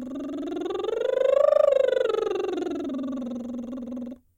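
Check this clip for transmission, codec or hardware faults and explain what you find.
Nothing stood out on listening to this music clip.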